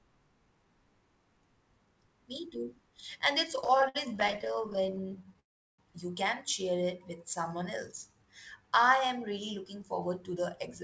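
Speech carried over a call path whose sound stops at 8 kHz, consistent with a G.722 codec, shows three kinds of fault. From 3.56 to 5.40 s, repeated stalls (stutter) occur: packets arrived late again and again and the jitter buffer kept emptying, so the receiver stretched the last sound across 47 short gaps, up to 60 ms each. That fills about 28% of the span, and the speech drags and judders. Then, from 5.40 to 5.80 s, just before "you can share", comes a call audio freeze. Sound is held and then drops to silence for about 360 ms. The likely cause is delayed packets leaving the buffer empty until the stream resumed where it stopped. Finally, two jitter buffer slow-downs follow, where the buffer rebuilt its reserve by repeating single pitch periods. From 6.77 to 7.64 s, after "you can share", playback runs at 95% speed. From 8.08 to 9.02 s, just before "really looking forward to", it runs at 90%. 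In both spans the speech is drawn out at unchanged pitch.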